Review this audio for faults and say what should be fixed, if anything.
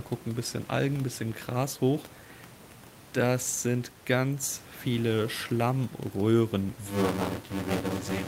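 Buffer tearing from 6.86 to 8.27 s: a 200 Hz rattle where writer and read pointer cross, so roughly a third of each period replays stale audio. Fix it by keeping the write pointer safely ahead of the hardware read position and resyncing after any underrun.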